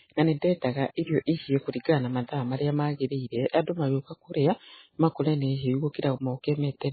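Speech running the whole way through with heavy MP3 compression damage, most likely from a very low bitrate, something like 16 kbps. Nothing survives above 4.5 kHz, and the starved encoder leaves a watery, swirly smear with chirpy sibilants and softened attacks.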